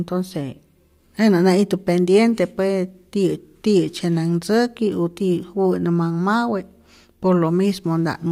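No technical faults can be heard anywhere in the speech.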